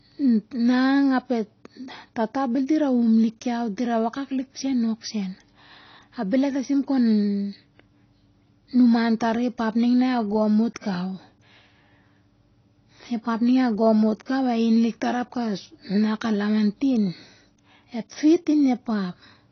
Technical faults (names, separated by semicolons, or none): AAC compression